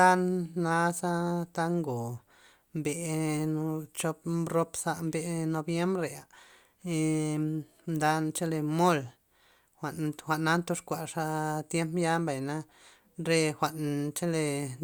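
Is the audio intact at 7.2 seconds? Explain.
Yes, the speech at 7.2 seconds is intact, with no dropout, click, distortion or other disturbance at that point.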